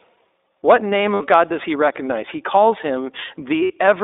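Speech clip passed through the iLBC codec: the band stops near 250 Hz and 3.7 kHz, and the voice sounds plainly rough and slightly synthetic, as each frame's excitation is coded independently at a rate that fits the 15.2 kbps, 20 ms frame mode. Lost iLBC frames occur at 1.14–1.21 s and 3.64–3.72 s, each about 60 ms, consistent with three consecutive packets dropped. The decoder fills each gap by repeating the last pitch cycle blended with noise, heard as a brief held, buzzy vowel, and normal speech returns almost at once afterwards because iLBC frames do not depend on their predecessors.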